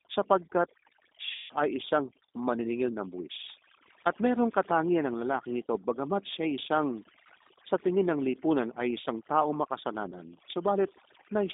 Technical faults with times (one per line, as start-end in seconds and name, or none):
0.00-11.54 overdone noise removal
0.00-11.54 G.729 codec
1.32-1.54 VoIP packet loss concealed by the speech codec
10.11-10.15 VoIP packet loss concealed by the speech codec